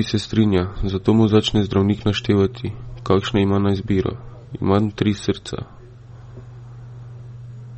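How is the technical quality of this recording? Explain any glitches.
The recording has clearly audible lossy-codec damage running through the whole speech clip, most likely from MP3 compression at a low bitrate. Nothing comes through above about 8.4 kHz, so the top end sounds dull and boxed-in. The encoder has too few bits to work with, so it chops the treble at a fixed point and drops quieter frequency detail that flickers in and out between frames. That leaves a watery, swirly texture on the speech, with a smeared, metallic edge on the sibilants, which fits something around 32 kbps.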